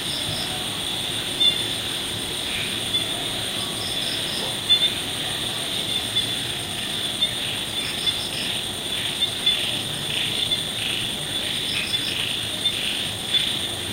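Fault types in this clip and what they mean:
Time-stretched section: Software likely compressed the second half of the clip to fit a shorter length, keeping the pitch by dropping short slices of the signal rather than resampling. From 6.39 s to the end, the audio runs about 1.43 times faster with the pitch unchanged. The pace jumps abruptly at that point, and the rest of the sound comes across as rushed.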